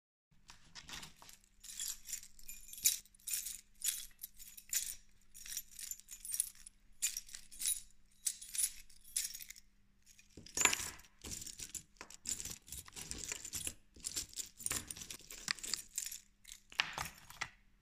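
At 3.0 s, 6.32 s and 15.16 s the sound jumps abruptly. Roughly a tenth of a second is missing at each, closer to 70 ms at 6.32 s. No silence fills the gap. This is likely a dropped buffer (overrun), where unread samples were overwritten.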